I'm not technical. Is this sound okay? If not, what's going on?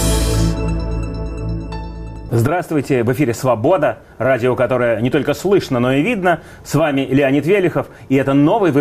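No. Throughout the clip there is sample clock jitter: the clock that tells the equipment when to measure the sound keeps wobbling, by less than a millionth of a second, so each measurement lands slightly early or late at random. Those small timing slips turn into errors wherever the sound changes quickly, so you hear a faint hiss or grittiness riding on the louder and brighter moments, which drops away when things go quiet.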